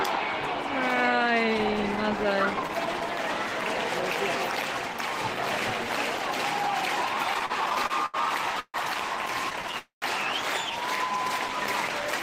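From 7.23 to 8.16 s, repeated stalls (stutter) break the sound nine times, gaps up to 80 ms. The jitter buffer keeps emptying. Held sound fills the gaps, and the audio drags.

At 8.60 s a call audio freeze holds the sound for 141 ms, ending in 50 ms of silence. Late packets are the likely cause.

From 9.50 to 9.75 s, five brief stutter gaps, each 11 ms or less, roughen the sound.

At 9.79 s a second freeze lasts 230 ms, fading to 120 ms of silence. The audio then resumes where it stopped.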